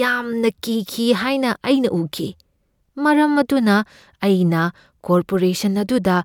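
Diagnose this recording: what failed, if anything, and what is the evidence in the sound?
Nothing failed here; the speech runs along without any sign of trouble from any stage in the chain.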